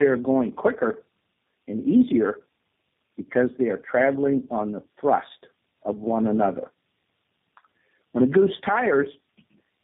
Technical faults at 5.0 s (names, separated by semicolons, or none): tandem speech coding